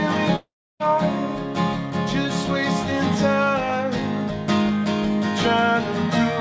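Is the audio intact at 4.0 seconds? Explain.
Yes, the audio is intact at 4.0 seconds, with nothing there but the ordinary sound of a call path whose band stops at about 8 kHz.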